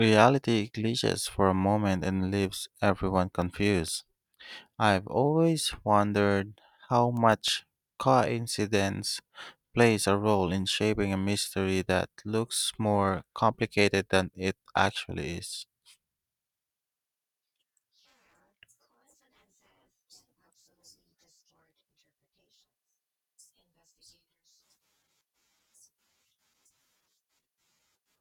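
Right after "moment and leaves everyone", 3.42 to 3.88 s, you get CD scratch ticks: four brief clicks, a few milliseconds each, where a scratch defeated error correction every disc turn. Five more follow "I've always wondered how" from 7.17 to 7.79 s.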